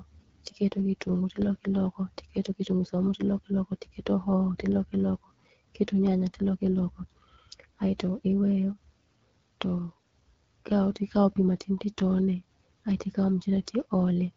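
From start to finish the speech carries AMR wideband (HD Voice) codec damage: a rough, raspy texture from a low-rate pulse-driven vocal tract model, consistent with 8.85 kbit/s. Unlike a narrowband phone codec, the band reaches about 7 kHz, its top filled with hissy shaped noise.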